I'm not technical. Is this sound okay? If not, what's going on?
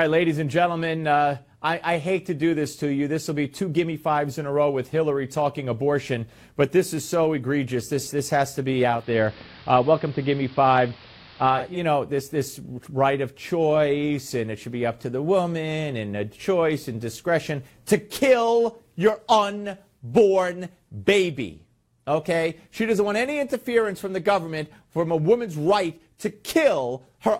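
No. From 8.84 to 11.83 s there is digital radio blending to analogue: the radio lost its digital signal and faded over about a third of a second to the station's AM broadcast. That brings in hiss, muffled treble and a slight volume change, before it fades back.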